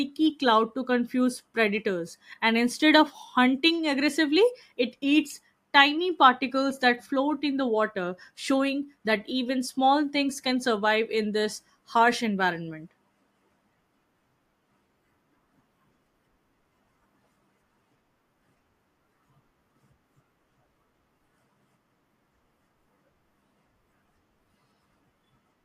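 Nothing in the speech stood out as a technical problem on listening.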